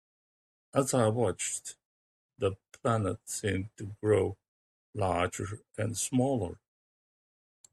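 Speech recording with no audible technical faults.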